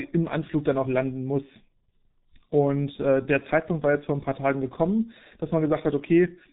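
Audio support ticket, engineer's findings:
G.723.1 codec, whole clip. Speech muffled and hoarse, nothing above 3.8 kHz, consonants smeared. Heavy damage, fits the 6.3 kbit/s mode. Coarse 30 ms frames and slow voice-model updates blur transitions. Not a plain low-pass: a filter dulls the sound but leaves consonant onsets crisp, while this roughens the voice itself.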